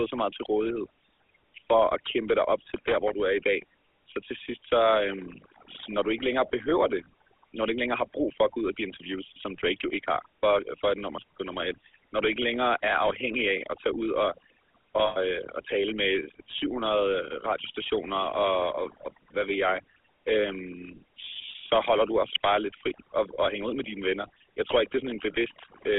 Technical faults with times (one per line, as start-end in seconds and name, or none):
0.00-25.98 overdone noise removal
0.00-25.98 GSM full-rate codec
7.04-7.06 lost GSM frames
15.06-15.17 lost GSM frames